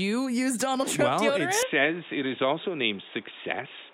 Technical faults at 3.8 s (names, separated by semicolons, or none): input switched to a poorer device